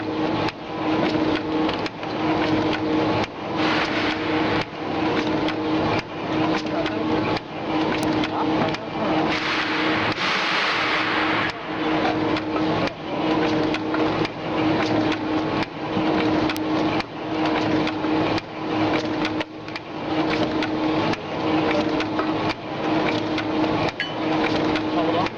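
The audio carries two electrical switching spikes, heard as short, sharp snaps sitting on top of the underlying sound at 8.03 s and 16.57 s. Each lasts no more than a couple of milliseconds and reaches roughly -10 dBFS. The likely cause is a nearby switch, motor or static discharge arcing briefly, with the audio line picking up that burst of interference as an added transient rather than as part of the recorded sound.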